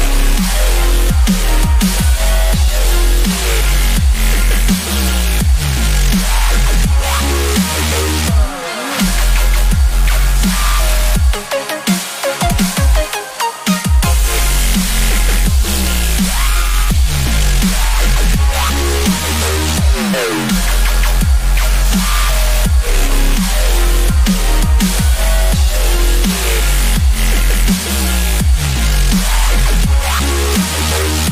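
No technical faults are audible anywhere in the recording.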